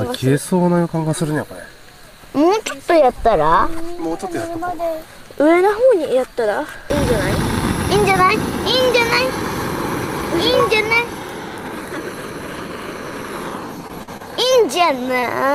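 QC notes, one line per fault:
13.87–15.24 s, short concealed packet loss: four brief gaps, at 13.87–13.91, 14.03–14.09, 14.17–14.22 and 15.20–15.24 s, each about 20 ms of audio lost except the 40 ms one at 14.03. The receiver patched each by extending the preceding sound and cross-fading back, giving brief smears or wobbles. On a spectrogram, harmonics or noise run flat and blurred across each patch. The waveform shows repeated cycles or shaped noise there with slight joins at each edge.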